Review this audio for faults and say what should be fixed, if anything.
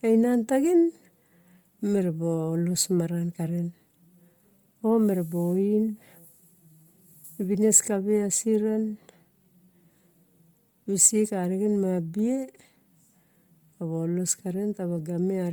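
Throughout the speech, the upper band sounds grainy and breathy, with noise replacing detail. Likely Bluetooth LC3 compression at a low bitrate, around 32 kbps. To prevent it, record over a wired or higher-bitrate link.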